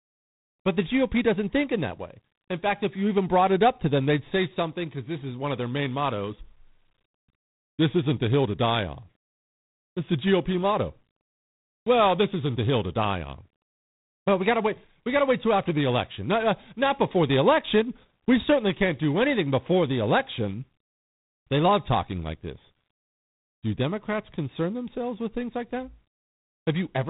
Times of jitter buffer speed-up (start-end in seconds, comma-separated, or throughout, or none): none